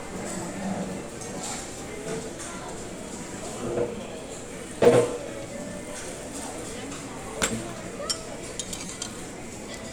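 At 3.26 s, 4.85 s and 8.86 to 8.89 s, a repeated buffer occurs: playback ran dry and a roughly 5.3 ms block, which fits a 256-sample buffer, played again two, one and four extra times. Each event is a brief click or buzz. On the waveform it shows as identical copied segments with hard joins, and on the spectrogram as thin vertical lines.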